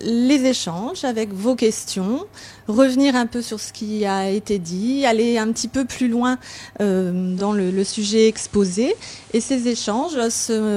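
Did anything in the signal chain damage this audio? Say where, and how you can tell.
Yes. The damage happened at reception, in the radio itself: digital radio blending to analogue. At 7.17 s the sound cross-fades over about 0.3 s into the FM broadcast of the same station. It returns at 10.27 s. During that stretch a hiss floor appears, roughly 30 dB below the signal. The level drops by about 1 dB. The receiver lost the digital stream and fell back to the noisier, band-limited analogue path.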